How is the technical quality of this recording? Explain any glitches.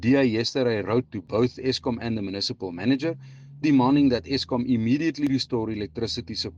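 There are two tiny glitches, both caused by overlap between stream segments. At 1.27 s and 5.27 s, about four seconds apart, overlapping segment timestamps make the player cut a couple of milliseconds of sound. The waveform jumps, and you hear a tiny skip each time.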